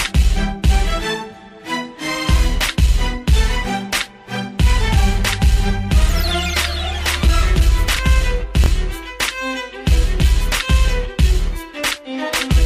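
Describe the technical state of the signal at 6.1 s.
At 6.1 s the signal is intact, with nothing audible there that points to a technical fault.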